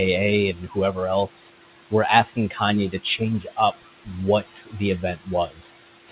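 Noise suppressor artifacts run through the whole recording. The room noise sits only about 11 dB below the speech, and the suppressor pulls it down by about 16 dB in the gaps. Then it lets it swell back under each phrase, so the background pumps with the talker. All of this sits inside a band that stops at 4 kHz, which fits a G.711 mu-law call path at 64 kbps.

Speech cut by the noise suppressor occurs six times, at 0.54–0.77 s, 2.34–2.61 s (just after "else were"), 2.91–3.21 s, 3.41–3.84 s, 4.43–4.81 s and 5.48–5.61 s. In each, the suppressor misjudged quiet speech as noise and turned it down with the background. The affected portions last around a tenth to a fifth of a second. Drops reach about 12 to 18 dB, the deepest near 3.4–3.8 s, leaving soft sounds and word tails swallowed or faint.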